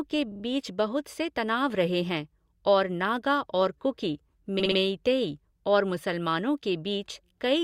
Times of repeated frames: 0.31-0.43, 4.59-4.78

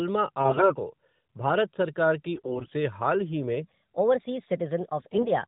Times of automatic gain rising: none

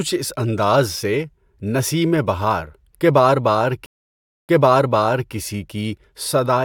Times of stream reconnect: 3.86-5.33

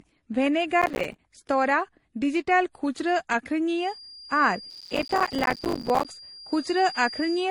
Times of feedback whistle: 3.73-7.51

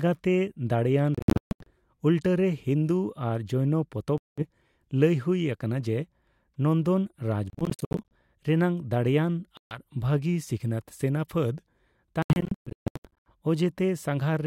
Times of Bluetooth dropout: 1.15-1.70, 4.18-4.43, 7.50-8.12, 9.57-9.78, 12.22-13.31

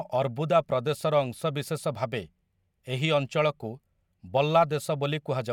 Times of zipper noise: none

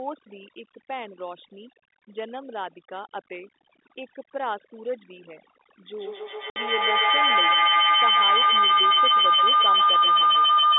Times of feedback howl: 5.97-10.78

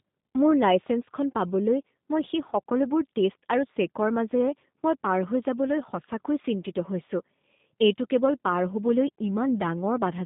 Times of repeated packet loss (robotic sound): none

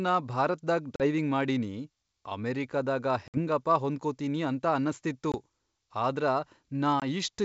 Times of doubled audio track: none

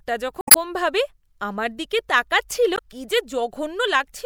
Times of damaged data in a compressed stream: 0.40-0.56, 2.75-2.79

